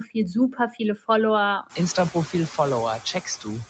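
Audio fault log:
throughout, noise suppressor artifacts: The call's noise suppressor judges which frequency bands hold steady background noise and pulls them down by about 12 dB, deciding afresh on every short frame. The noise floor therefore does not sit still. It drops away in the gaps between phrases and comes back up beneath the speech, where the suppressor eases off. This gives the background a pumping, unsteady quality. It is easiest to hear once the room's own background rises by roughly 19 dB at about 1.5 s.
0.52–0.80 s, speech cut by the noise suppressor: Here the suppressor mistook part of the speech for noise and turned it down along with the background. The sharpest dip is about 9 dB, and roughly 150 ms of sound within this stretch is affected. Because these pieces are lowered while the neighbouring speech is left alone, they come across as swallowed and faint, as if that part of the utterance had briefly receded from the microphone.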